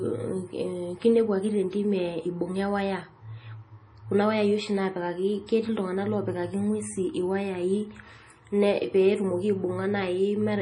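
MP3 compression throughout: the speech has nothing above 10.5 kHz and a heavy watery swirl with chirpy s sounds, likely from a starved encoder, fitting roughly 32 kbps.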